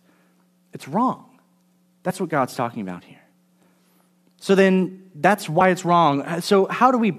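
Damaged data in a compressed stream makes the decoder misread corrupted frames and lose sync, leaving brief glitches in the speech from 2.09 to 2.11 s and at 5.60 s, right after "then that's".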